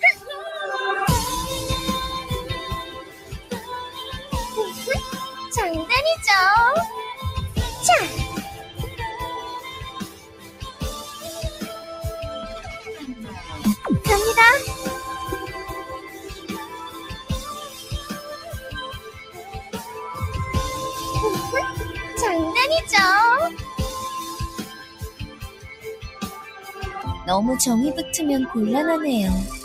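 The audio pumps and thins throughout: held and fading material keeps sinking while sudden onsets punch through, and the level swings by roughly 10 dB as the processing opens and closes. This is a noise suppressor applied to music or sounds, a speech-oriented denoiser that mistakes steady tones, ambience and decaying tails for background noise and keeps pulling them down, so only the transients survive intact. Distinct moments of sound cut by the noise suppressor occur at 2.84–4.32 s (about 10 dB), 8.58–8.99 s (about 9 dB), 9.65–10.82 s (about 11 dB), 13.0–13.84 s (about 6 dB), 16.01–19.73 s (about 9 dB) and 24.64–26.76 s (about 10 dB). In each, sustained or fading material sags or has its decay clipped short for somewhere between a fraction of a second and a couple of seconds in total. The suppressor is treating those stretches as noise and attenuating them harder than the surrounding audio.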